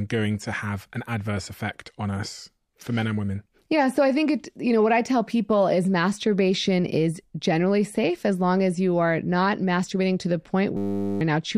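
A system hang loop runs from 10.77 to 11.21 s: the machine froze while the audio hardware kept replaying one 10 ms stretch of its buffer. That tiny slice repeats dozens of times, producing a steady 100 Hz buzz in place of almost half a second of lost sound.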